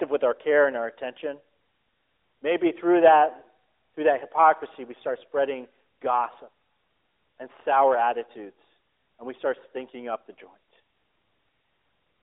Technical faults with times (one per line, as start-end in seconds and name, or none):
none